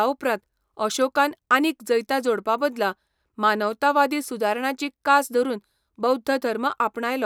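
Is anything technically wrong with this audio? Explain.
No, the recording carries no technical faults, with the speech signal intact and undamaged throughout.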